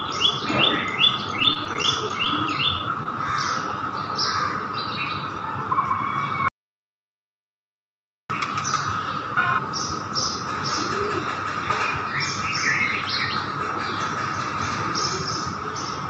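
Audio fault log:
1.39–2.27 s: repeated packet loss (robotic sound). Eight gaps, the longest 23 ms, each patched by extending the preceding sound, giving a choppy texture.
2.79 s and 3.03–3.06 s: short concealed packet loss. About 10 ms missing each time, bridged by continuing the prior sound, heard as a brief smear or wobble.
6.48–8.30 s: audio dropout to silence. The signal falls to silence for about 1.8 s with no room tone, likely from a lost input or failed link.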